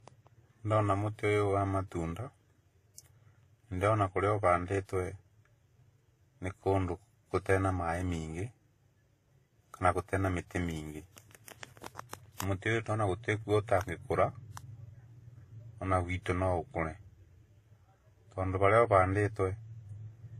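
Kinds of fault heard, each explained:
Transcoding between lossy codecs: the speech was likely encoded at a low bitrate, consistent with HE-AAC near 20 kbit/s, then re-encoded, pointing to WMA near 64 kbit/s. The first stage's artefacts persist alongside the second codec's own, and nothing remains above 14.6 kHz.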